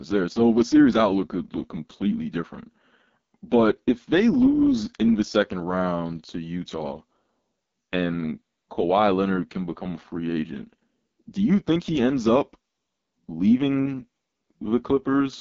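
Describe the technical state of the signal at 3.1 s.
At 3.1 s the speech carries AMR wideband (HD Voice) codec damage, present throughout the clip. Heavy roughness and rasp from coarse pulse-excited vocal-tract modelling fit the 6.6 kbit/s lowest mode. The upper band is synthetic noise, with nothing above 7.5 kHz.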